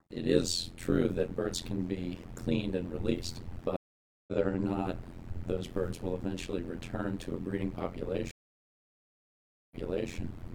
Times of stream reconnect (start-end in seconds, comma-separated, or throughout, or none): 3.76-4.33, 8.31-10.13